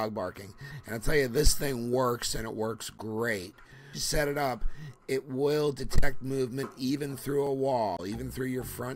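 At 3.93 to 3.95 s there is a skip ahead. About 400 ms of audio is missing, and the two sides meet with no gap. Later audio was already waiting, so the stretch was dropped and playback jumped straight forward. The join sounds abrupt.

From 4.17 to 5.21 s comes a jitter buffer speed-up. The buffer was holding more audio than it aims for. To cut the delay, the receiver trimmed short pitch-period pieces again and again, roughly 100 ms in total. Playback runs at 110 percent with unchanged pitch, so it sounds hurried.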